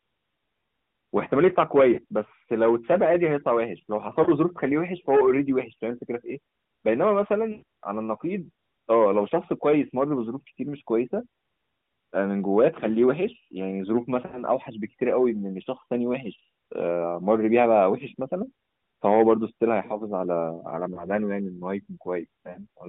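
Radio errors corrupted AMR speech frames, so the decoder patched lost frames with the last good pitch and vocal tract settings at falling gain. The lost AMR speech frames at 1.94, 4.24, 7.52, 14.26, 20.94 and 22.50 s leave brief dips or warbles, sounding drawn out and fading at 7.52 s (about 100 ms), against the narrowband AMR codec's band.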